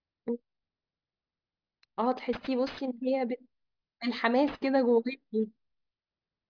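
Throughout the speech, aliasing makes sibilants gritty and metallic. Energy above a 5.5 kHz fold point was not filtered out before the rate dropped, which fits an 11 kHz rate. It mirrors back as unrelated pitches roughly 20 dB down. Plain band-limiting would only dull the top.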